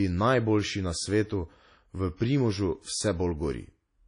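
From the start of the speech to its end, the sound is likely shaped by WMA compression. Nothing survives above 10.1 kHz, and the plainly audible damage is ringing and washy, with a hiss that swells and fades along with the voice. That pattern points to a low bitrate, around 32 kbps. A plain low-pass filter would only dull the top. Here long transform blocks smear quantisation noise across tens of milliseconds, and weak spectral detail drops out entirely.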